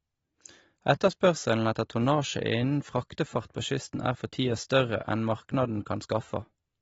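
From start to finish the speech sounds dull and smeared. Nothing is heard above 7.7 kHz. Sibilants have a fizzy, watery texture. This is likely AAC compression, using AAC-LC at a low rate, which fits a bitrate near 28 kbps. The encoder discarded the upper band and coarsely quantised what remained.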